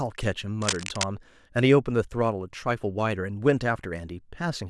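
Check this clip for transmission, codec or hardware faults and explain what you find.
One hardware fault turns up in this speech clip. From 0.62 to 1.04 s there's cable scratch noise: dense, uneven rustling bursts sitting about 5 dB below the speech. That's likely a worn cable or connector being moved, its contact resistance jumping around and spraying noise into the signal.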